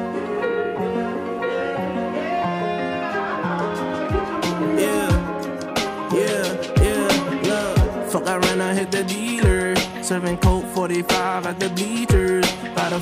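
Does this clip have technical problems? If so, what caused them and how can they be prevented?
No, no technical problems heard.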